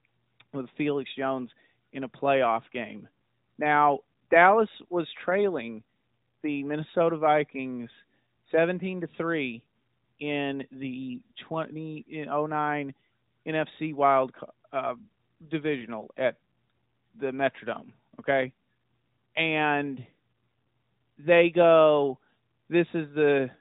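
No technical faults can be heard anywhere in this recording.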